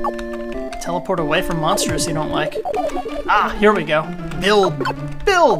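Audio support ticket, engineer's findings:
No faults found; nothing to report in the engineer's findings for this audio support ticket.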